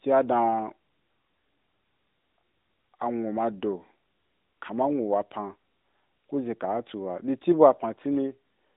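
No faults found; the speech sits in a narrow telephone band from roughly 200 Hz to 3.7 kHz, with nothing above 3.8 kHz, as expected of the mobile link it passed through.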